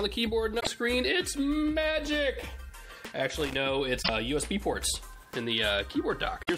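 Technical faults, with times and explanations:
0.56–0.67 s, 3.99–4.10 s and 6.39–6.50 s, damaged data in a compressed stream: each is a brief chirp, squawk, click or short hole lasting about 0.11 s. Corrupted bytes in the compressed stream make the decoder misread or reject those frames and lose sync until it finds the next valid frame header.
3.37–3.55 s, loose connector crackle: an irregular burst of scratchy crackle lasting about 0.18 s. A worn or dirty contact rapidly makes and breaks as it shifts, chopping the signal on and off, and any DC present on the line adds pops.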